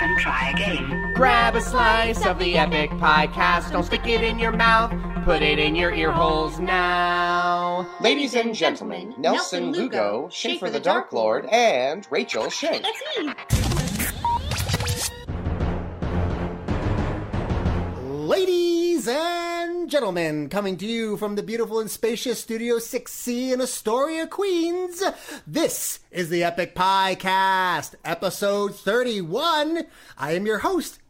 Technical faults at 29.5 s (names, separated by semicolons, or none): none